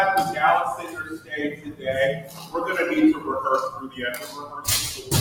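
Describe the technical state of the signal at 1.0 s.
A noise suppressor built for speech is running on audio it was never meant for, and at 1.0 s it is in the middle of cutting the sound hard. Between 0.84 and 1.32 s the suppressor treats the sustained part of the sound as noise and pulls it down, reaching about 13 dB below its surroundings at the deepest point. For most of that half-second the sound sinks and thins. Steady, held content and any fading tail are cut short, while sharp onsets get through largely intact.

This dip sits within a broader fault that spans the whole clip. Because the noise suppressor is applied to sound rather than speech, its gain keeps swinging as it mistakes ambience, sustain and reverb for background noise. The loss moves by something like ten decibels. Across the clip the suppressor's constant reclassification makes the sound pump, flutter or thin out, with the body of the sound repeatedly drawn down behind the attacks.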